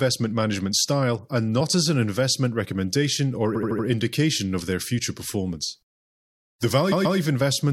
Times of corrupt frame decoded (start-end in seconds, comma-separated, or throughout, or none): none